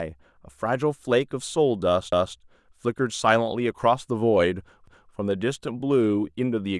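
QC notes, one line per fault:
2.12–2.37 s and 4.87–5.12 s, overlapping chunks: a stutter where 250 ms of speech plays twice, because each 2.5 s chunk starts before the previous one ends.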